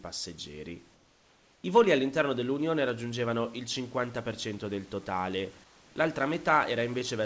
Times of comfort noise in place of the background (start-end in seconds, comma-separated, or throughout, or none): 0.94-1.64, 5.64-5.96